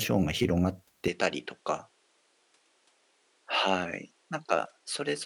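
A speech clip whose sound changes abruptly at 1.08 s and stays changed to the end. From that point the top of the spectrum is missing. The level drops by about 5 dB. A faint new background noise appears well below the speech. There is no gap at the change. This is likely an input switched to a poorer device, a second microphone with narrower bandwidth and its own noise.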